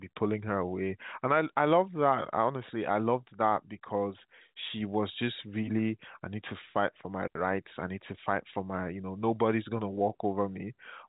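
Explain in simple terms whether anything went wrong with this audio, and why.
Nothing went wrong here.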